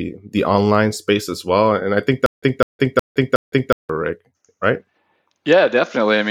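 At 2.26 s, right after "well and i think", the speech breaks into a stutter with silent gaps that runs to 3.89 s, ending before "rick right". A fragment of about 203 ms repeats four times, each followed by about 163 ms of digital silence, so a burst returns every 366 ms. The likely cause is a stalled player or stream replaying its last buffered fragment at each retry. The speech that belonged in that stretch is lost.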